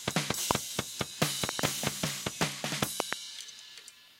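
Loud pops break into this sound recording three times: a single pop at 0.51 to 0.53 s, then a double pop between 1.49 and 1.61 s, and another double pop between 3.00 and 3.15 s. Each one stands roughly 20 to 25 dB above the surrounding sound, which carries on underneath. The likely cause is a sudden voltage step or spike, from a plug, a switch, static or a driver glitch, that the following circuitry shapes into a sharp thump.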